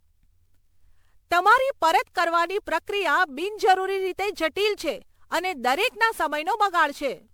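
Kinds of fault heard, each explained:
Generation loss: The speech carries a swirly, watery smear and a hollow, notched quality for the whole clip, with consonant onsets softened and blurred. That is more damage than a single pass at 128 kbit/s would leave, which points to the signal likely having been decoded and re-encoded through MP3 around ten times, each pass requantising on a shifted frame grid so that noise and spectral gaps pile up.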